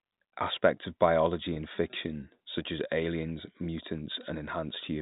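At 1.54 to 1.56 s, between "of biology" and "in fiction such as", there is a packet loss with pitch repetition. About 20 ms of audio went missing, which fits a single lost packet. The receiver filled the hole by repeating the last pitch period. Because the gap is so short, it sounds like a brief held, slightly buzzy moment in the speech. The telephone band of the G.711 coding is audible throughout.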